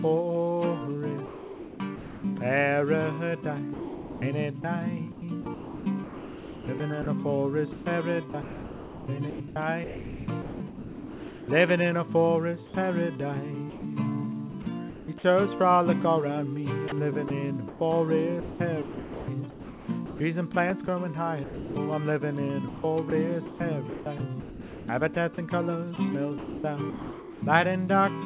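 A sender's voice detector likely toggled between sending and not sending from 1.26 to 2.24 s, and comfort noise replaced about 0.82 s of sound there. This sound chopped by the voice detector makes the audio choppy.

At 3.74 to 4.22 s the detector likely mistook the sound for background and stopped sending. In this sound dropped by the voice detector, about 0.48 s gives way to steady comfort noise until sending resumes.

Chopping likely recurs from 5.12 to 11.48 s, with about 3.6 s replaced. A brief likely drop at 12.7 s swallows roughly 30 ms. Further likely chopping follows at 13.7 to 15.24 s (0.44 s replaced), 16.88 to 21.76 s (1.7 s), 22.68 to 25.16 s (1.0 s) and 25.96 to 27.42 s (0.8 s), all through the narrow G.711 call path that leaves nothing above 4 kHz.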